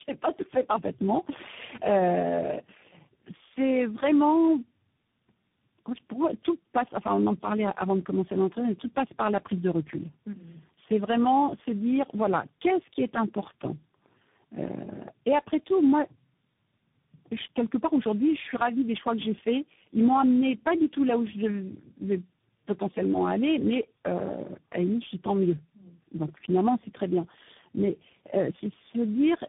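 Tandem speech coding runs throughout. The speech sounds rough, muffled and warbly, which fits three speech codecs in a row. Nothing is heard above 3.7 kHz.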